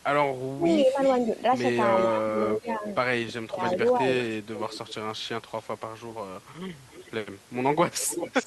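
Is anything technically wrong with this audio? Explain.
Yes, two faults recur.

Speech suppressed in double talk, from 0.49 to 1.33 s and from 2.07 to 4.05 s: the talker dips or breaks up by up to about 35 dB, then about 20 dB, likely because the echo canceller could not separate the talker's speech from the overlapping far-side echo and turned both down. Unlike dropouts, the gaps track overlap.

Echo leak, at 1.02–1.43 s, 1.97–2.92 s, 3.6–5.65 s and 6.74 s to the end: a delayed copy arrives 0.35 to 0.38 s late, rising from about 20 dB to about 10 dB below speech, likely from loudspeaker pickup not fully cancelled. A fixed lag distinguishes it from reverberation.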